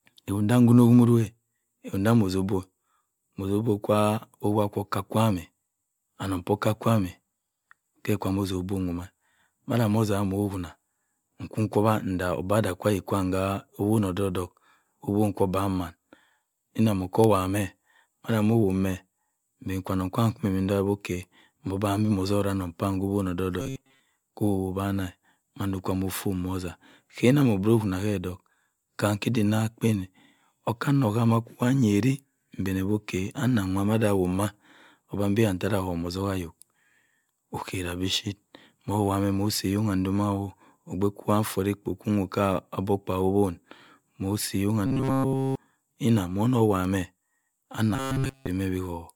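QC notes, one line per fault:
throughout, generation loss: the speech has likely been through MP3 encoding about five times at roughly 134 to 135 kbit/s. Each pass quantised again on a shifted frame grid, so the damage piles up into a swirly, hollow, smeared sound with blurred consonant attacks.
23.60–24.00 s, 44.87–45.55 s, 47.96–48.47 s, robotic sound from repeated short buffers: new audio likely arrived too seldom, so playback looped a slice of about 7.5 ms in place of real audio. That fixed loop imposes a rigid metallic buzz at 134 Hz. Most of the first run is repeated, and the later two are repeated entirely.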